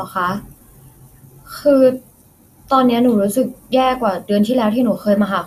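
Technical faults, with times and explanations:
Throughout, MP2 compression: the speech sounds dull and gurgling, with a granular roughness and nothing above about 14.9 kHz. This is likely low-rate MPEG Layer II coding, near 80 kbps, starving upper sub-bands of bits so they drop out and remaining bands are coarsely quantised.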